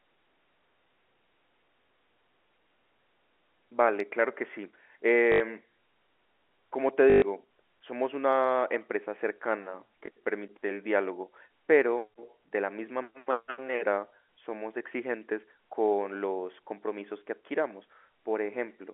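At 5.32 to 5.40 s, 7.10 to 7.22 s and 10.06 to 10.08 s there's packet loss with the last packet repeated: gaps of 80, 120 and 20 ms get filled by replaying old audio, so you hear buzzy robotic stutters and, at 10.06 s, a small blip, which fits 20 ms packets, through a narrow telephone-band G.711 line.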